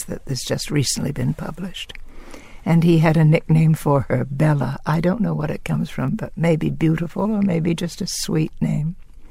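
At 6.08 s there is a bit error spike: a single sample jumps abruptly to about -25 dBFS and falls straight back, as if one bit in the stored or transmitted value had flipped and shifted it by a power of two. It is heard as one dry, sharp tick unrelated to the surrounding sound. On the waveform it is a lone vertical needle one sample wide. On a spectrogram it shows as a thin vertical line spanning all frequencies.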